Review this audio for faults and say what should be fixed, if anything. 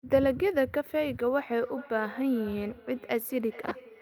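Feedback echo between two devices from 1.54 s to the end: a second device replays this microphone's sound, returning about 0.4 s later at about -20 dB, seen as faint time-shifted copies on a spectrogram. Keep one device's speaker muted, or use headphones, when two devices share a room.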